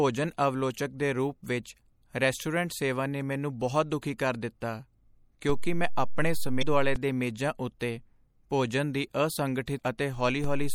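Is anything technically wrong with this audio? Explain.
Yes. Three kinds of fault can be heard in this speech clip.

MP3 compression runs through the whole clip, and the damage is plainly audible. It is likely MP3 encoding at a low bitrate, and the thinness fits about 64 kbps. With so few bits, the encoder cuts the treble off at a fixed frequency and drops weak spectral lines that flicker on and off from frame to frame. The speech sounds watery and swirly, with smeared consonant onsets. On a spectrogram there is a hard shelf where the high frequencies stop, and the detail just below it is patchy and speckled.

A DC step occurs twice: once from 5.50 to 6.96 s, and again from 10.44 s to the end of the clip. Each time, the waveform's zero line suddenly jumps away from centre. The speech itself carries on unchanged, but each jump is heard as a low thump. On the waveform, the whole trace shifts up or down as a block. 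On the spectrogram, the jumps appear as brief broadband streaks, strongest at the bottom.

Damaged data in a compressed stream shows up at 6.59 to 6.63 s and at 9.76 to 9.80 s. The compressed frames there were corrupt, so the decoder misread them, lost its place and searched for the next valid frame header. Each event is heard as a short chirp, squawk, click or hole lasting about 40 ms. On a spectrogram it looks like a narrow vertical smear of unrelated energy. On the waveform it is a small glitch where the signal does not join up cleanly.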